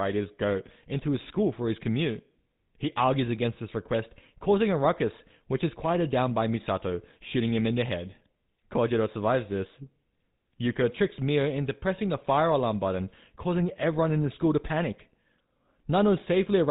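From start to finish the speech has been through the GSM full-rate codec, and it shows plainly. The codec rebuilds speech from a vocal-tract model driven by a sparse, regularly spaced pulse train, so there's a constant buzzy, gravelly grain riding on every syllable. Nothing gets through above 4 kHz, which leaves the sound boxed in and dull, and the overall character fits the old 13 kbps GSM rate.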